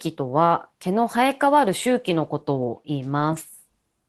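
At around 3.19 to 3.21 s there's a lost packet rebuilt from error correction. A single 20 ms packet went missing, but the next one carried a low-bitrate backup copy, so the decoder played that instead of leaving a hole. You won't hear a dropout, just a brief patch that's a bit rougher and noisier than the surrounding speech. That roughness sits against the call's usual Opus coding texture, with everything above about 12 kHz cut off.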